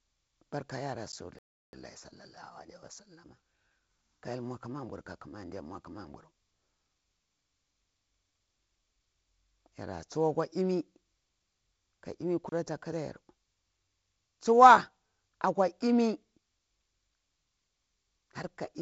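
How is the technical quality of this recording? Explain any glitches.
Three kinds of glitch show up in this speech: two short dropouts to digital silence, a stall, and a sped-up stretch right after it. Underneath, the audio has the band-limited, slightly hissy character of G.722 wideband telephone coding, with nothing much above about 7 kHz and a bit of extra noise in the lower band that fits the 48 kbit/s mode.

Block of digital silence: At 1.12 s there's a 10 ms hole, and from 12.49 to 12.52 s a longer one of 30 ms. In both, a chunk of samples got replaced by silence, probably because the output buffer wasn't filled in time. The signal snaps to silence and back with no fade. The first is basically a tick, and the second is long enough to hear as a tiny gap.

Playback stall: From 1.39 to 1.73 s the sound just stops mid-flow for about 345 ms, then picks up where it left off. The likely cause is the player running dry of data or its thread getting blocked, leaving nothing to output until it recovered. 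It's a clear, noticeable pause, much longer than the click-type dropouts.

Time-compressed catch-up: Right after the stall, from 1.73 to 4.03 s, the player works off its backlog by running about 1.15 times fast. It does this by trimming out small slices and cross-fading the joins rather than resampling, so pitch stays put. What you hear is speech that sounds a bit rushed for a couple of seconds.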